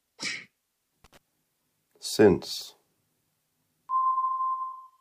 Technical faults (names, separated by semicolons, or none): loose connector crackle